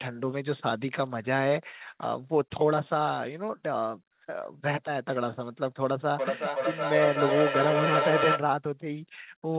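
From 6.19 to 8.55 s there's a feedback echo between two devices. A second device in the room replays the far end, and its mic sends that back, which the echo canceller can't catch. Repeats come round about every 0.4 s, thinning and ringing, and they build to roughly speech level rather than fading. The whole clip is band-limited at 4 kHz, which fits G.711 mu-law on the call path.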